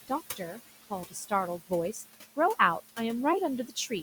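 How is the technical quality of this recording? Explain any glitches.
The recording has two audible problems, both from noise suppression.

Noise suppressor artifacts run through the whole clip. The suppressor judges, frame by frame, which frequency bands hold steady noise and turns them down, here by about 15 dB. The room noise, about 15 dB below the speech, dips in the gaps and comes back under the talking.

Speech cut by the noise suppressor happens twice. From 0.36 to 0.58 s, the suppressor mistakes part of the speech for noise and pulls it down by up to about 9 dB, over roughly a tenth of a second. From 1.08 to 1.32 s, the drop is deeper, about 16 dB, over a bit more than a tenth of a second. In both places, soft parts of the speech sound swallowed and faint.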